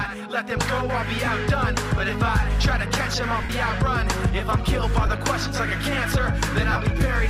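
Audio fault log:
1.25–1.27 s, 3.43–3.50 s, 5.06 s, 6.72–6.76 s: lost LE Audio frames, gaps of 22.5, 60, 15 and 30 ms, fitting 7.5 ms LC3 frames. The decoder repeats the last spectrum with scrambled signs, so each gap is a brief noisy smear; the 60 ms one also fades.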